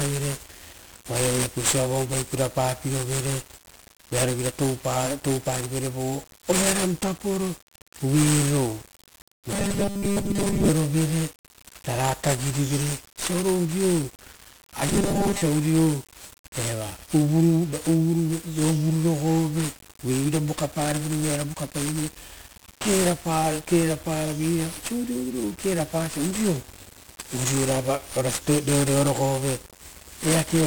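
The whole clip carries heavy 1-bit DFPWM compression, with one bit per sample nudging a charge up or down, leaving the speech fuzzy, crackly and smothered in hiss, consistent with around 48 kbps. From 14.89 to 15.42 s there's a robotic sound from repeated short buffers: a rigid 200 Hz metallic buzz, likely from a 5 ms chunk looping while most of the real audio gets skipped.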